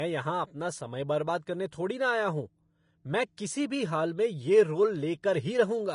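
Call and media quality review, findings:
Throughout the speech: hissy, grainy treble, nothing above 10.5 kHz. Likely Vorbis compression at a low bitrate, around 33 kbps, coarsely quantising the treble so detail turns to noise.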